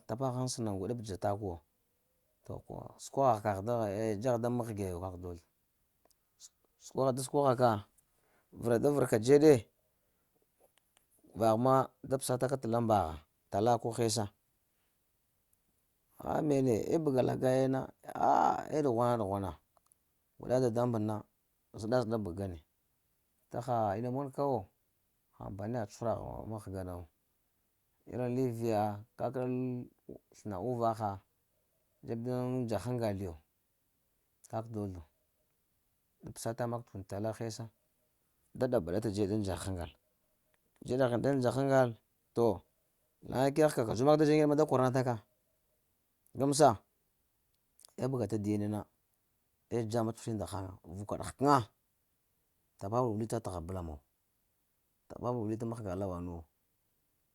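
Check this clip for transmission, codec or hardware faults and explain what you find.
Nothing turned up here: the speech comes through steady and intact, with no transmission, codec or hardware trouble to point to.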